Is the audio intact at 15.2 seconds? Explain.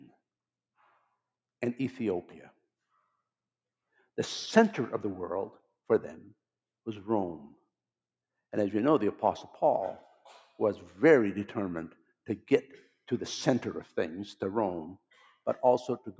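No, sound cut by the noise suppressor from 15.02 to 15.33 s: mistaking it for noise, the suppressor pulls the level down by up to about 16 dB, sinking it for roughly a fifth of a second.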